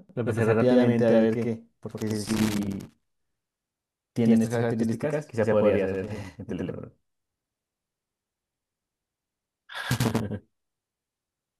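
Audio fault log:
throughout: channel delay (doubling). One channel arrives about 93 ms late, which fits a 4096-sample buffer, so the mono sum repeats every syllable as an equal-level slap.
1.91–3.02 s, 5.95–6.29 s, 9.85–10.11 s: loose connector crackle. A faulty contact rapidly breaks and remakes the signal path, chopping the speech into irregular bursts of scratchy crackle.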